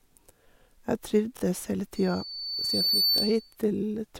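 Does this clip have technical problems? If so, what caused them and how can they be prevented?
Yes. A brief stutter at 1.37 to 1.42 s and again at 3.18 to 3.20 s is a repeated buffer. The same 23 ms slice replays with hard joins, twice then once, consistent with a 1024-sample buffer that wasn't refilled in time. Larger buffers or higher processing priority prevent this.

A thin tone at 4.5 kHz swells over about a second into a loudspeaker feedback squeal, from 1.95 to 3.56 s, ending up about 5 dB above the speech. The microphone was re-amplifying its own loudspeaker output. Lowering the monitor gain, moving the microphone away from the speaker, or notching 4.5 kHz prevents it.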